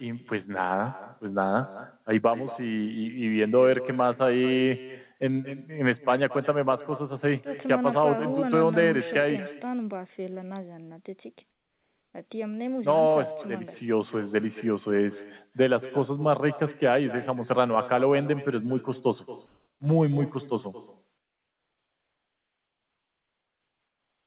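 From start to finish, the speech carries an echo with no canceller. A second, quieter copy trails each phrase by roughly a fifth of a second. It sits about 16 dB below the direct sound. It sounds thinner. The far end's loudspeaker fed its microphone, and nothing stripped that signal out. The round trip then returned it, so every syllable gets a faint shadow.

Three pauses have comfort noise in place of the background. The real background is very faint, around 53 to 56 dB below the loudest speech. From 11.5 to 12.14 s, it turns into a flat, featureless hiss about 4 dB quieter. From 19.46 to 19.8 s, the fill rises about 3 dB instead. From 21.18 s to the end, it drops about 5 dB. The likely cause is the sender going silent when it detected no speech, with the receiver synthesising noise to cover each gap. Nothing is heard above 4 kHz, which fits a narrowband telephone codec.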